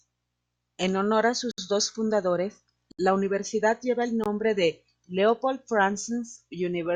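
Blocks of digital silence fall at 1.51 s (about 67 ms), 2.92 s (70 ms) and 4.24 s (20 ms): the speech drops abruptly to silence and returns without a fade, likely because output buffers went unfilled, leaving short holes.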